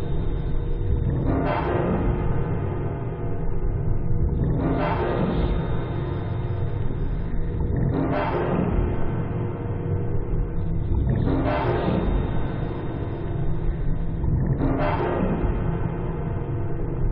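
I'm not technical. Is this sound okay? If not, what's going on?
Yes, no technical faults are audible anywhere in this recording.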